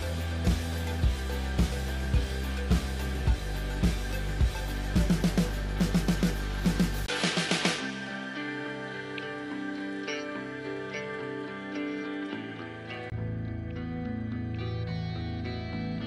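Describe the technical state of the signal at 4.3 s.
Nothing is wrong with the signal at 4.3 s; the audio there is intact, with no dropout, distortion or other fault.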